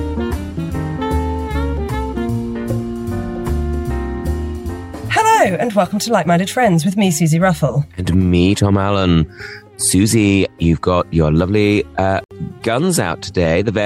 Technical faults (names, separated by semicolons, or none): gap at a join of encoded pieces